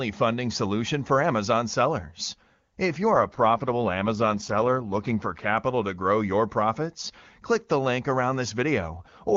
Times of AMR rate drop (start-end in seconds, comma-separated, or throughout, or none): 3.12-5.58, 8.98-9.36